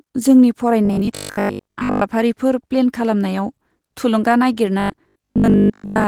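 Throughout the clip the speech carries Opus voice compression at a low rate that fits 16 kbps. The coder runs in its hybrid mode: linear prediction handles the lower band, while a transform layer covers the upper band across the full band. The excitation is coded coarsely, so the voice sounds plainly muffled and hoarse, with a faint robotic edge. On a spectrogram the upper band looks smeared and blocky in 20 ms steps rather than finely detailed.

From 0.85 to 2.03 s the speech turns into a rigid metallic buzz that still roughly follows the speech. This is robotic sound from repeated short buffers. The likely cause is audio arriving too seldom, so the last 20 ms is replayed over and over and most of the real signal in that stretch is lost. The repetition imposes a fixed 50 Hz pitch. A spectrogram shows flat, evenly spaced harmonic lines at multiples of 50 Hz, and the waveform shows identical 20 ms cycles.

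The same robotic sound from repeated short buffers returns at 4.80 s and lasts until the clip ends at 6.07 s. It again imposes a 50 Hz buzz, likely built from a single 20 ms buffer repeated many times, and most of the real audio in that span is missing. Here too the waveform shows a copied 20 ms block repeating, and the spectrogram shows the same stiff 50 Hz harmonic comb.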